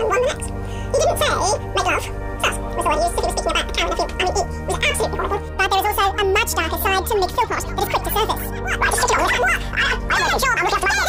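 From start to finish, the sound runs twice as fast and a full octave high: audio read two samples at a time, pairing samples into single frames.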